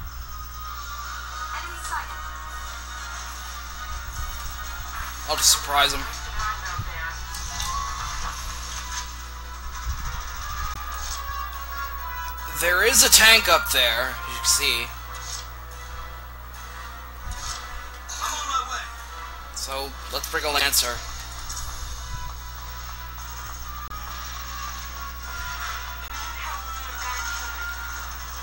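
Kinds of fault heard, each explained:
Damaged data in a compressed stream: corrupted stretches of the encoded stream make the decoder misread frames, lose sync and hunt for the next valid header. Each one is heard as a short chirp, squawk, click or hole, 30 to 50 ms long, at 10.74, 20.58, 23.86 and 26.08 s.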